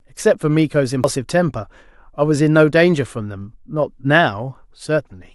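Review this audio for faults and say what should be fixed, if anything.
There's a CD skip at 1.03 s: a short tick, then the speech carries on from a different spot. What happened is the player's laser lost its track, probably from a knock or a flaw on the disc surface, and landed on another turn of the spiral. The player muted for a few milliseconds while it relocked, then resumed wherever it had ended up, so a chunk of the speech is either skipped or repeated. To prevent it, re-rip the disc with a secure, error-checking ripper after cleaning it.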